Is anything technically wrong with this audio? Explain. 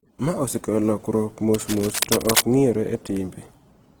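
Yes. There are two problems.

Opus compression, heard throughout the speech: the tone is rough and grainy, with a noisy texture, though the full bandwidth remains. This is likely Opus in its CELT music mode at a low bitrate, around 16 kbps. Starved bands are filled by folding or noise rather than left empty.

Cable scratch noise, from 1.54 to 2.44 s, just after "osekelo lokruok": dense, uneven scratching and rustling sits roughly as loud as the speech. The likely cause is a worn cable or connector being moved, so its contact resistance fluctuates rapidly and injects noise bursts.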